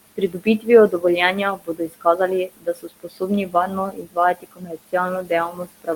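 From the start, noise suppressor artifacts run through the whole recording. The suppressor pulls steady background down by about 20 dB frame by frame, so the room noise, sitting roughly 15 dB under the speech, sinks in the gaps and swells beneath the talking.

From 0.16 s to the end, there is speech cut by the noise suppressor. The processor mistakes parts of the speech for noise and attenuates them along with the background, by about 22 dB at the deepest point, so softer consonants and word endings sound swallowed and faint.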